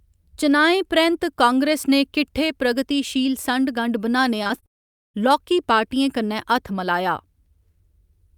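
Right after "प्रगतिशील संढ गंढ बनाने", from 4.43 to 4.64 s, repeated packet loss leaves four short gaps, each 20 ms at most, patched by repeating sound. About a third of that stretch is filled this way, so it sounds choppy and robotic.

From 4.66 to 5.16 s the audio cuts out for about half a second: a brief smeared continuation, then near-silence. This is likely a long network dropout, and the missing portion never returns.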